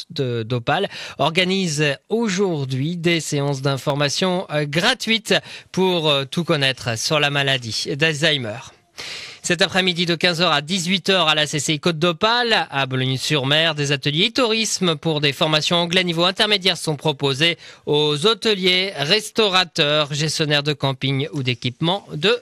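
Three clicks at 3.90 s, 7.74 s and 13.23 s come from a repeated buffer: when fresh audio arrived late, the device replayed its last 1.45 ms block, which fits a 64-sample buffer. The first and last play one extra time, and 7.74 s repeats four extra times, making a slightly longer buzz. On a waveform each shows identical tiny cycles with hard steps at the joins; a spectrogram shows thin vertical broadband lines.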